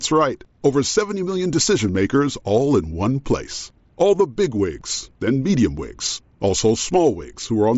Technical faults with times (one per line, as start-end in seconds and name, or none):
none